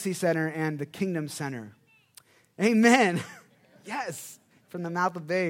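No technical faults can be heard anywhere in this speech recording. There is nothing in it to place in time or to describe.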